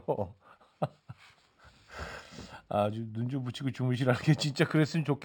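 Throughout, imaging from linear upsampling: straight-line interpolation, fitting a 12 to 48 kHz rate change, leaves a faint 6–12 kHz mirror image, adding metallic shimmer to sibilants.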